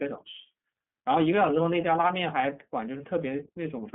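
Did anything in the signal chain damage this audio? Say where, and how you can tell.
Yes, at the codec: iLBC codes each frame's excitation independently, leaving the speech plainly rough and synthetic throughout, confined to 150 Hz–3.4 kHz.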